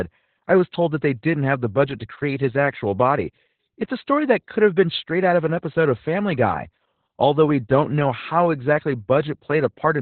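Opus voice compression runs throughout: narrowband SILK coding at what sounds like about 8 kbps leaves nothing above 4.2 kHz, making the speech muffled, hoarse and faintly robotic.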